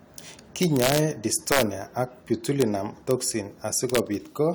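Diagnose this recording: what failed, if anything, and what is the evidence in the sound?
Integer overflow in a fixed-point gain or sample-format conversion stage: violent cracks on loud speech at 0.63–0.98 s, 1.52–1.62 s, 2.61 s, 3.11 s and 3.95–3.98 s, with peaks only about 0 to 2 dB over full scale. The waveform shows those peaks wrapping to the opposite rail instead of flattening, and the spectrogram shows broadband vertical streaks.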